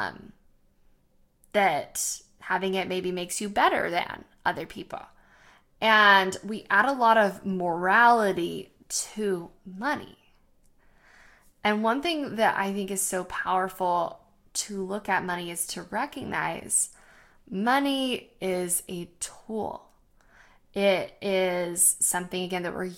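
At 12.96 to 12.98 s, between "thing that I think" and "so powerful to look", a corrupt frame decoded produces a brief chirp-like burst. Damaged bits in a couple of compressed frames were decoded regardless, misplacing spectral energy, which peaks around -20 dBFS.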